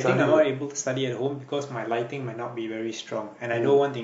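No technical faults are audible anywhere in this speech recording.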